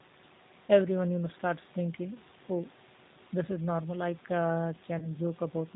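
Throughout, the speech passes through the G.729 codec at 8 kbit/s, rebuilt from a filter, pitch predictor and few pulses, so it sounds plainly rough, synthetic and cut off above 4 kHz. From 4.99 to 5.09 s, VoIP packet loss concealed by the speech codec fills about 30 ms of missing audio, which fits a single lost packet, by extrapolating the last frame. That gives a brief, fading smear, and the voice stays weakened until about 5.09 s.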